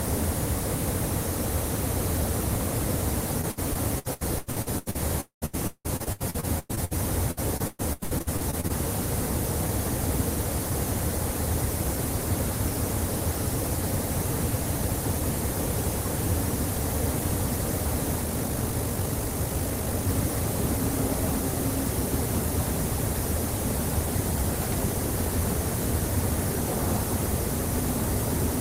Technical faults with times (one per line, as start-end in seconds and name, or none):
3.41-4.96 repeated packet loss (robotic sound)
5.21-5.44 long network dropout
5.46-6.93 repeated packet loss (robotic sound)
7.31-8.71 repeated packet loss (robotic sound)
18.19-20.07 time-stretched section